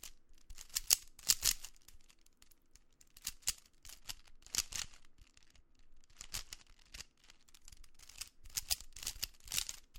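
From 4.0 s to about 7.45 s the sound turns dull and muffled. That's de-emphasis applied wrongly: a treble cut meant to undo pre-emphasis hit audio that either never had it or got cut twice, leaving the top end about 11 dB down at 10 kHz against 1 kHz.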